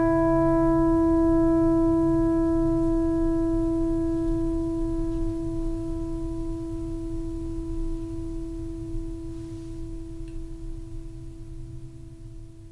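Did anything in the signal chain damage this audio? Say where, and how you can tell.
No, nothing in this music recording points to damage at any stage of the signal chain.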